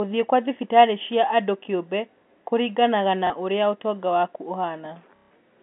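Speech over a phone-band G.711 line with two spots of packet loss where the last packet was repeated: a brief 30 ms blip at 3.27 s, between "andũ kĩũmbe kũringanaga na" and "ũrĩa ũtonga waku", then a 150 ms robotic buzz from 5.16 to 5.31 s, consistent with 30 ms packets looping.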